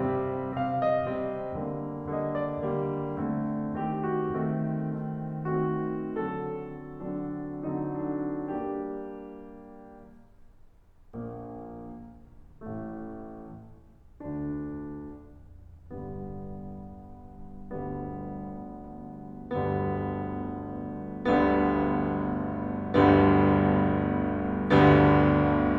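No technical faults can be heard anywhere in this music.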